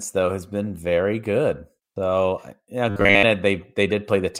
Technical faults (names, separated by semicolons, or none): robotic sound from repeated short buffers